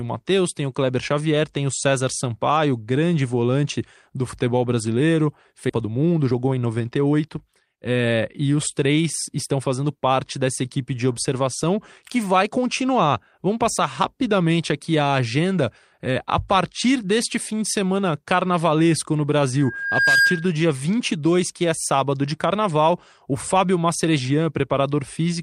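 A speech recording with three faults. Just after "volante do futebol brasileiro", at 5.7 s, roughly 0.7 s of audio was dropped in transit or by an overflowing jitter buffer, so playback jumps ahead and the two sides are joined with no gap. From 5.81 to 7.74 s the jitter buffer, holding too much audio, trimmed short pitch-period pieces to catch up, removing about 0.3 s, so the speech runs at 113% speed at unchanged pitch and sounds hurried. After "de semana carnavalesco no", from 19.58 to 20.52 s, a microphone picked up its own loudspeaker and the loop gain exceeded one at 1.6 kHz, producing a loudspeaker feedback squeal that swells over about half a second to roughly 5 dB above the speech.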